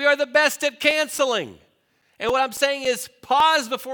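From 0.63 to 3.40 s, just after "are the best", CD scratch ticks recur about four times a second, each a few milliseconds. A disc blemish defeats error correction every revolution.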